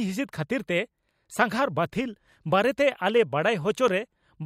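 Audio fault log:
3.88 to 3.91 s, loud pop. One sharp pop peaks about 5 dB over the speech, which carries on beneath. Likely a sudden voltage pulse added to the signal.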